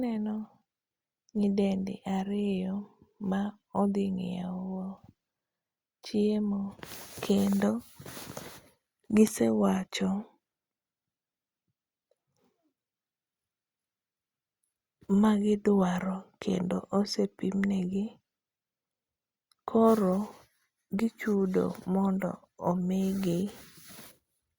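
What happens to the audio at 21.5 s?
At 21.5 s the speech continues without interruption, and no fault can be heard at that moment.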